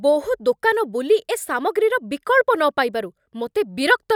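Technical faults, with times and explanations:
No technical faults heard.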